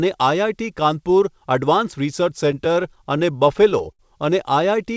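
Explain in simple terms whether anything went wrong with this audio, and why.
Repeated stalls (stutter) run from about 2.52 to 4.02 s. The sound arrived late, so playback ran dry thirteen times. Each gap, the longest about 69 ms, was bridged by stretching the last sound, so nothing is lost, but the speech drags and stutters.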